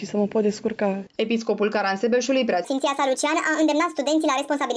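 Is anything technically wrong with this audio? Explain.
Yes. From 2.65 s to the end at 4.76 s there is a wrong sample rate fault. The samples play back faster than they were captured, with no conversion. This fits 16 kHz material being clocked out at 22 kHz. Speed and pitch rise together by a factor of about 1.38, roughly 5.55 semitones, so the sound turns high and hurried. On a spectrogram, every harmonic and spectral band jumps upward at 2.65 s, and events compress in time. On the waveform, cycles and envelopes become visibly shorter.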